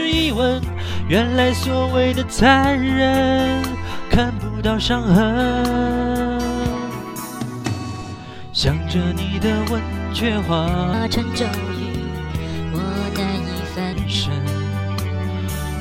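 From 10.94 to 13.93 s there's a section at the wrong speed: the sound runs about 1.24 times too fast, so it hurries along and jumps up by roughly four semitones, then snaps back. That's likely a playback or editing step locked to the wrong clock for that stretch.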